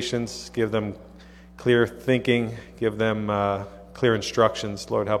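No technical faults are audible anywhere in the clip.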